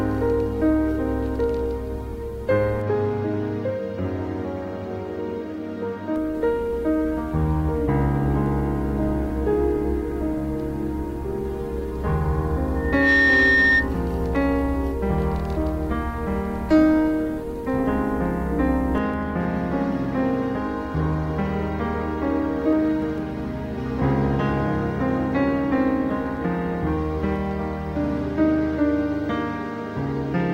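Everyday sounds here, with a loudspeaker feedback squeal at 12.76–13.90 s: a 1.8 kHz tone swells within about a third of a second, sitting a few dB above everything, as the mic hears its own speaker.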